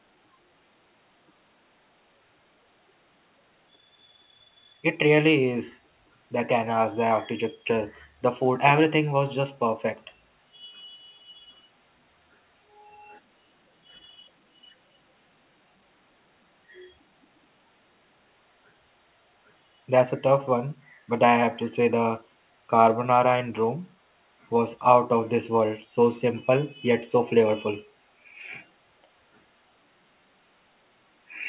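A speech clip carried over A-law G.711 telephone coding at 8 kHz, with nothing technically wrong in it.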